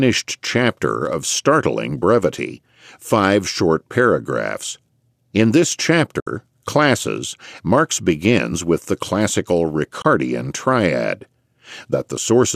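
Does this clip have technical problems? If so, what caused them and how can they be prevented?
Yes. Two short holes of AAC frame loss with muting occur in the speech: 6.20–6.27 s (about 70 ms) and 10.02–10.05 s (about 30 ms). The decoder zeroed the lost frames' spectrum, and the overlapping windows fade sound out and back in, so the holes have soft edges rather than a hard cut. The gap lengths fit short 10 ms frames, likely from low-delay AAC. Adding forward error correction or packet retransmission on the network link would prevent these losses.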